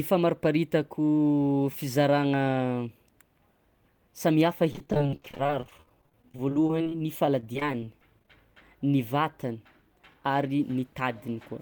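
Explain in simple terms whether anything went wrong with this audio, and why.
From 4.71 to 8.28 s there's repeated packet loss, the robotic sound. Dozens of tiny dropouts, none longer than 30 ms, get patched by stretching the last bit of speech, so nearly a quarter of that stretch is filler. That's why it sounds choppy.

Then at 10.14 to 10.71 s there's a jitter buffer speed-up. Too much audio had piled up waiting, so the receiver snipped out tiny slivers, about a twentieth of a second in total. The speech runs at 108% speed, a bit hurried, though the pitch stays the same.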